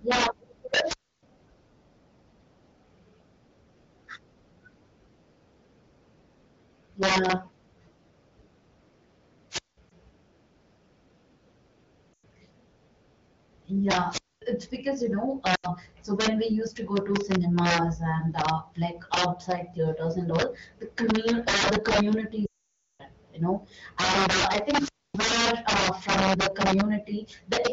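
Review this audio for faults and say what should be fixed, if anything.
Integer overflow runs through the whole clip. Loud peaks, driven about 18 dB past full scale, wrap to the opposite sign instead of limiting, producing harsh cracks on a small share of samples.

Wireless microphone squelch dropout occurs at 0.83–1.23, 9.50–9.77, 14.08–14.42 and 24.60–25.30 s, just before "uh from the". The fading FM signal triggers the receiver's squelch, muting the sound for 190 to 295 ms.

Lost AMR speech frames occur at 9.90–9.92, 12.14–12.24 and 15.55–15.68 s, between "it's because you know" and "so when we used", and at 22.45–23.03 s, between "uh the community" and "you know and uh". The decoder repeats its last good parameters with falling gain, giving dips, warbles and drops to near silence.

To prevent these, use saturating arithmetic in the gain stages, position the wireless receiver and antennas for a strong signal, and add error protection or redundancy to the radio link.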